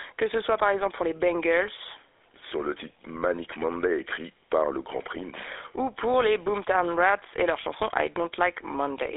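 GSM full-rate codec damage runs throughout the speech, which fits the 13 kbps full-rate coder. It rebuilds the voice from a vocal-tract model driven by coarse, regularly spaced pulses, giving a plainly audible buzzy, gravelly roughness, with the band limited to 300 Hz to 3.6 kHz.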